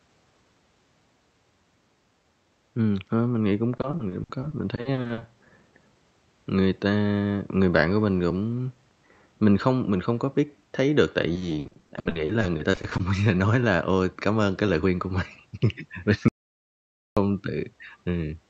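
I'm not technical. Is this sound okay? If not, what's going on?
No, not quite. This is a speech recording that came through an internet call, and it has a couple of problems.

First, there's repeated packet loss (robotic sound) twice: from 3.77 to 5.23 s and again from 11.33 to 13.01 s. During those stretches little chunks of the call data didn't arrive in time, so the system filled each hole by stretching out the last bit of sound it had. The holes are short, none longer than about 60 ms, but they come one after another, and roughly a third of each stretch is patched-over filler. That's why the voice sounds choppy there.

Then at 16.28 s there's an audio dropout to silence lasting about 0.9 s, until 17.17 s. The sound just stops dead, with no background noise at all, then picks back up. Whatever was said in that gap is lost. It's most likely a brief break in the audio input, like a connection hiccup or a quick mute, where the recording kept running but captured nothing.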